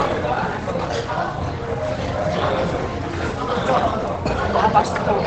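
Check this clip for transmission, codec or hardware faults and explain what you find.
One codec fault runs through the whole clip: Opus compression. From start to finish the everyday sounds are muffled and plainly hoarse, and nothing is left above about 9.6 kHz. That hard ceiling, together with the muffled, hoarse texture, most likely comes from Opus running in its speech-oriented SILK mode at wideband, which fits a low bitrate near 16 kbps. MP3 damage would leave warbling spectral holes. A plain low-pass filter would cut the top without adding the hoarseness heard here.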